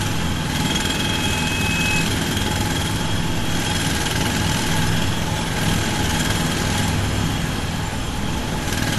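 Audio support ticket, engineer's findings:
Whole clip: smeary, swirly highs with a second layer of grit on top, nothing above about 12.1 kHz. Likely transcoding between lossy codecs, sounds like low-rate AAC re-encoded to WMA, so the second encoder spends bits on the first one's artefacts and adds its own.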